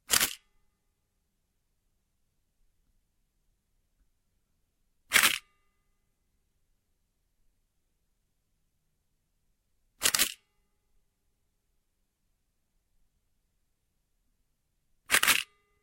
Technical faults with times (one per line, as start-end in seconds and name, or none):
none